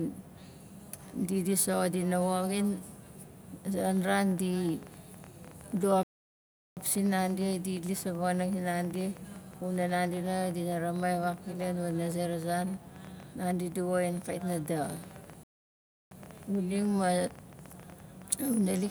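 A speech recording carries a train of clicks from 3.79 s to the end, about 10.6 per second at an irregular pace, each roughly as loud as the speech and audible through pauses. On a spectrogram they appear as thin vertical broadband lines, and in the waveform as sharp spikes. The likely cause is interference or a faulty connection or power supply. There are also two playback stalls, at 6.03 to 6.77 s (about 0.74 s) and 15.43 to 16.11 s (about 0.68 s), where the sound cuts out mid-flow before resuming. Both show as flat silent gaps in the waveform and blank columns on the spectrogram, likely from the player running out of buffered data or its thread being blocked.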